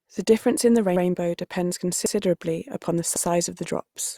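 Overlapping chunks cause a stutter at 0.96 to 1.06 s after "difference in the", at 2.06 to 2.16 s just before "upon the", and at 3.16 to 3.26 s after "upon the". The speech was handled in 1 s chunks, each beginning 100 ms before the previous one ended, so that slice plays twice with a click at each seam. On a spectrogram, an identical 100 ms pattern appears twice side by side, and the waveform shows a sudden discontinuity at each join.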